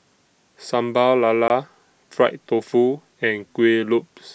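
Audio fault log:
1.48 to 1.50 s, block of digital silence: the speech drops out to silence for about 20 ms and snaps straight back with no fade, leaving a tiny hole. Most likely the output buffer wasn't filled in time.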